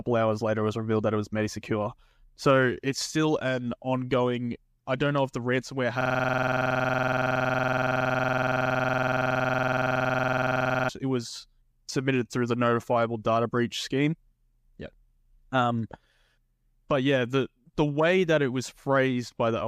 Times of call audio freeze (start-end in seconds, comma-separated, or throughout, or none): none